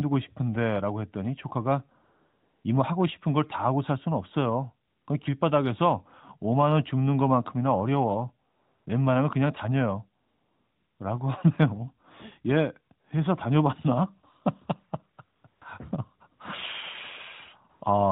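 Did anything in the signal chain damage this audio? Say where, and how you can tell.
Yes. The damage comes from the codec stage in a mobile call, as AMR comfort noise. The phone's voice detector judged the talker silent and stopped sending speech frames. The receiver filled each gap with smooth synthetic noise built from a rough level and spectrum. You hear the real background swap for a steady hiss at 2.04–2.64 s, 4.88–5.08 s, 8.50–8.86 s, 10.22–11.00 s, 15.36–15.44 s, 15.48–15.62 s and 17.70–17.82 s. The switching is audible at each edge.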